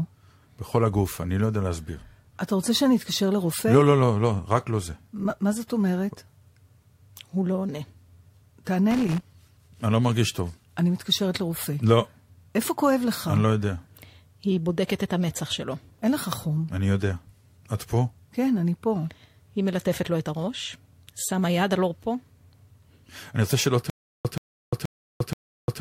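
At 8.91 s a worn or dirty contact starts making and breaking as it shifts, producing a loose connector crackle. Until 9.2 s the speech is chopped into an irregular burst of scratchy crackle.

From 23.90 s to the end, a stalled stream likely replays its last fragment on each retry, causing a stutter with silent gaps. A 129 ms burst of speech repeats four times every 478 ms, each followed by 349 ms of digital silence, and the speech meant for that stretch is lost.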